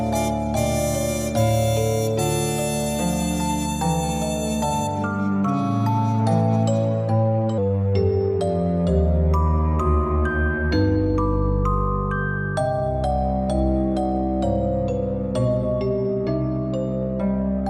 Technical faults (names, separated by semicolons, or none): section at the wrong speed